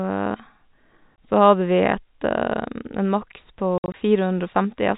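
Packet loss filled with silence cuts a 20 ms hole at 1.17 s, then roughly 100 ms of holes scattered across 3.78 to 3.94 s, the longest run 60 ms. The gaps are dead silent with hard edges, in 20 ms steps, unlike concealment, which would smear repeated sound across them, over band-limited G.711 telephone audio.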